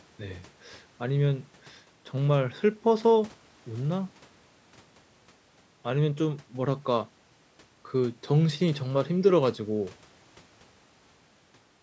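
No technical faults can be heard in this speech clip. It has passed through a call's microphone processing, which leaves nothing above 8 kHz and trims away the lowest bass, as that path normally does.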